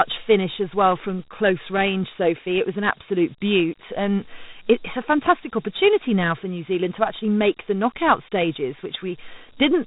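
Dialogic VOX ADPCM runs throughout, from start to end. The speech was coded by the Dialogic (OKI) scheme, which stores only a coarse 4-bit step between successive samples and adapts the step size as it goes. That quantisation is plainly audible as a gritty hiss riding on the speech. Nothing sounds above about 3.8 kHz, so the upper band is gone, and the narrow band with that grain fits 32 kbps at 8,000 samples a second.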